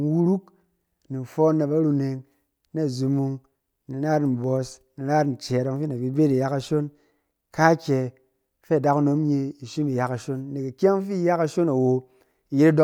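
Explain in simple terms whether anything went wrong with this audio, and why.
Nothing stood out on listening to this recording of speech; no glitch, interruption or other problem could be heard anywhere in it.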